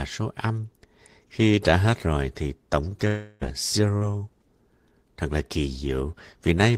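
At 3.07 s, just after "hết rồi thì tổng", the speech gives way to a fading continuation of the last sound that lasts until 3.43 s. This points to a long network dropout, likely around a third of a second of audio never arriving and being bridged by the receiver, so that stretch of speech is lost.

From 3.97 to 4.03 s a short concealed packet loss leaves a brief smear. About 40 ms of audio failed to reach the decoder in time, and the receiver filled it by extending the preceding sound before blending back into the real signal.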